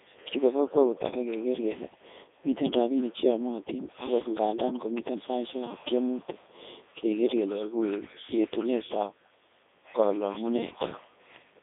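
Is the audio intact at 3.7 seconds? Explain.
No. Codec 2 vocoder damage runs through the whole clip, including 3.7 s. The speech is rebuilt from sine waves, likely near 3.2 kbit/s. It sounds robotic and buzzy, with nothing above 3.7 kHz.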